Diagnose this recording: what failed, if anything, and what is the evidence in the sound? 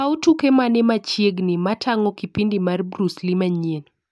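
Nothing in the signal chain shows an audible failure; the speech signal stays steady and continuous in level, timing and tonal balance throughout the recording.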